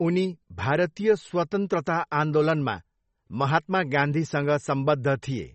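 From start to finish the speech carries the marks of what is likely heavy MP3 compression, consistent with a low bitrate near 32 kbps. The treble stops dead at about 8.3 kHz, so sibilants lose their edge, and the remaining detail sounds watery and swirly, with metallic chirps. On a spectrogram this shows as a flat ceiling at 8.3 kHz and speckled, flickering gaps below it where weak frequency lines drop in and out between frames.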